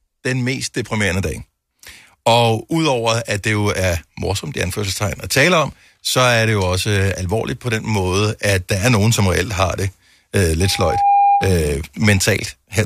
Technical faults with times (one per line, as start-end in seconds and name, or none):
10.60-11.61 loudspeaker feedback squeal